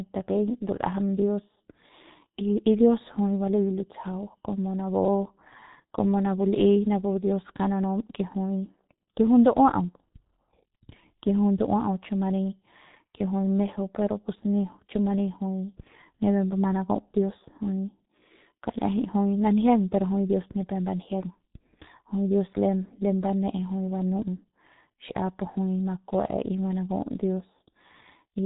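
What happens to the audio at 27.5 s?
At 27.5 s the speech carries the same heavy G.723.1 codec damage heard throughout: nothing above 3.8 kHz, a dull hoarse texture, and smeared consonants, which fits a bitrate around 6 kbit/s. Unlike plain low-pass filtering, the slow frame-by-frame voice model adds roughness.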